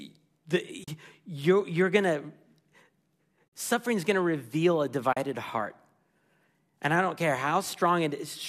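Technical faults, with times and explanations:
0.84 to 0.88 s, 3.50 to 3.52 s and 5.13 to 5.17 s: AAC frame loss with muting. There are soft-edged gaps of about 40, 50 and 40 ms just before "you're you're going to", just before "suffering is going to", and right after "going to reveal a". The decoder zeroes the missing frames, and the overlapping windows fade the sound out and back in. The gap lengths fit a few 10 ms frames from the likely low-delay AAC stream.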